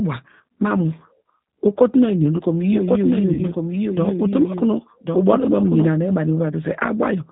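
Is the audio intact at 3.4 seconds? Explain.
No. From 3.34 to 3.41 s, VoIP packet loss concealed by the speech codec fills about 40 ms, which fits two lost packets, by extrapolating the last pitch and filter at falling gain, so the speech smears into a fading buzzy tone or coloured noise. Throughout, the G.729 codec at 8 kbit/s rebuilds speech from a filter and a few pulses, cutting everything above 4 kHz and leaving it rough and synthetic.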